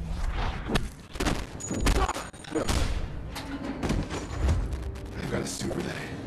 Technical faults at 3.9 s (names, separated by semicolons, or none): none